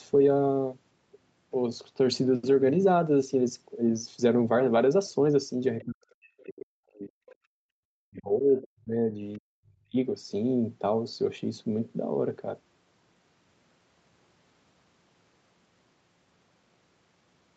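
At 5.8 to 5.85 s the echo canceller likely failed to clear the loudspeaker signal from the microphone, so the other side's voice leaks through as a brief, faint scrap, roughly 30 dB below the talker. The same leak returns at 7.29 to 7.35 s at a similar level, and again at 9.34 to 9.38 s, fainter still.

From 5.85 to 7.1 s the canceller likely could not tell the talker from the echo while both sides spoke, so it pulled everything down. This speech suppression in double talk makes the voice sink by something like 40 dB. The same happens from 7.98 to 9.17 s and from 9.39 to 9.96 s.

Between 7.38 and 7.7 s the canceller clamped the microphone hard while the loudspeaker played. This background gating by the echo canceller makes the room sound drop by about 36 dB for around a third of a second, then return when the canceller releases it.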